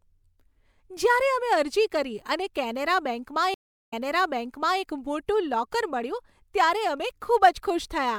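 At 3.54 s the speech cuts to about 0.38 s of silence, then a stream reconnect restarts the decoder and replays audio from about 0.89 s earlier, through 4.81 s. That repeated stretch, not just a gap, separates it from a simple dropout.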